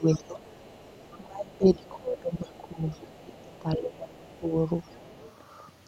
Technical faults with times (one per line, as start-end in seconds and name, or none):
0.00-0.46 speech suppressed in double talk
0.47-1.18 other side's voice leaking through
1.17-4.55 speech suppressed in double talk
1.52-3.42 other side's voice leaking through
3.94-4.35 other side's voice leaking through
4.83-5.34 other side's voice leaking through